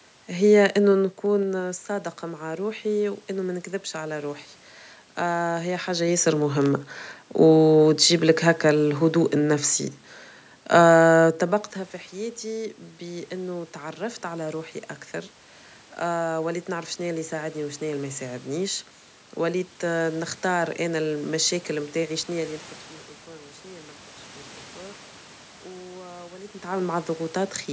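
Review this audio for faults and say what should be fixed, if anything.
Zipper noise, 0.84 to 1.86 s: the level drops by about 10 dB over this second in discrete 2 dB steps, roughly five a second, instead of a continuous ramp. Each jump is an instant gain change, so it leaves a small click, and the clicks make a ticking that rides on the speech, ending just before "مع روحي وأنه ما". Prevent it by ramping the gain per sample instead of stepping it.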